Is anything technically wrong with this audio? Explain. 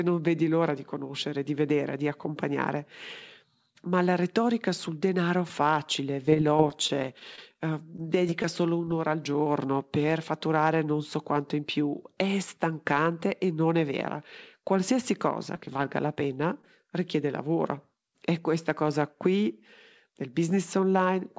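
Yes. Scattered short gaps affect two stretches of the speech. From 6.26 to 8.93 s, between "retorica sul denaro facile" and "al giorno per fatturare", about twenty tiny ticks and smeared hiccups break in. A shorter cluster of about seven follows at 15.54 to 16.69 s. Each gap is around 20 ms at most. Packets were lost or arrived late, and the receiver filled each small hole by stretching the preceding sound. The speech travels through a G.722 call path, which gives the band-limited sound with nothing above 8 kHz.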